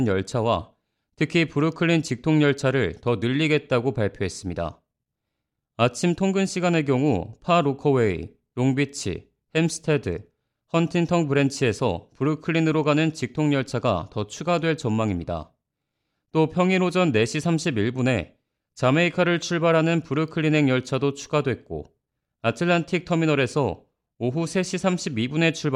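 No technical faults can be heard anywhere in the speech recording. Nothing in it calls for a timestamp or a fix.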